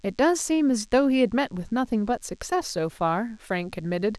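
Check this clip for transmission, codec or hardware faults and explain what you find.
One hardware fault is present: DECT cordless phone buzz, running through the whole clip beneath the speech. It sits well down, roughly 40 dB below the speech. A nearby DECT handset or base station transmits a short radio burst every 10 ms. Something in the audio circuit rectifies that radio energy and turns it into an audible signal. The bursts repeat 100 times a second. The result is a steady, thin buzz at 100 Hz, rich in harmonics.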